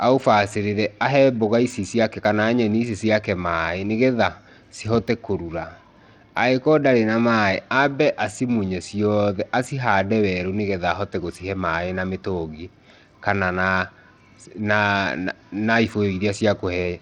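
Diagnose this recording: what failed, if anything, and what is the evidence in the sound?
The codec stage is at fault, most likely Bluetooth SBC compression, running throughout the speech. Treble is thin and unstable, dropping out and flickering from moment to moment, with a gritty, granular noise and aliasing riding on the sound from start to finish. The sub-band coder appears starved of bits, consistent with a low rate of around 80 kbps: the upper bands get little or no allocation while the lower ones are quantised coarsely.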